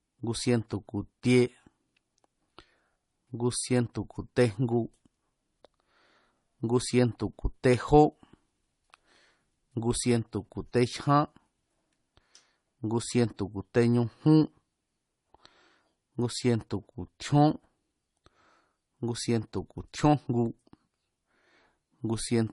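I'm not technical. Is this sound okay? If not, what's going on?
No. From start to finish the speech sounds dull, with nothing at all above about 11.1 kHz, so the crisp top end is missing. This is likely transcoding between lossy codecs: the audio was squeezed with MP3 and then squeezed again as AAC. The second pass reworked the first one's flaws and added its own, so both kinds of damage are heard together.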